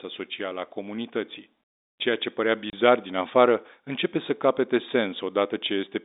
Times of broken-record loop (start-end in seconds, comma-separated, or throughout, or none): none